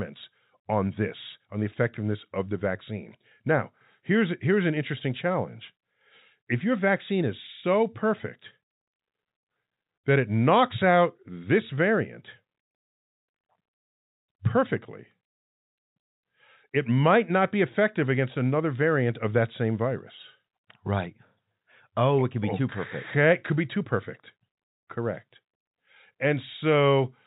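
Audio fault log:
Nothing goes wrong anywhere in this speech, which just carries the narrow, top-limited sound you'd expect from ordinary G.711 telephone coding, with no content above 4 kHz.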